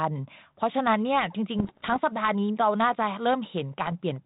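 Bit errors on an ADPCM link hit the speech from 1.59 to 1.97 s and again, more briefly, from 3.84 to 3.92 s. The telephone-band sound fits a 32 kbit/s G.726 link. Each corrupted bit upsets the decoder's step size and predictor, so the damage rings on past the error itself. The result is pops, rough gritty bursts and brief level jumps. The first stretch is denser, at just under 1 percent bit errors, and the second is lighter.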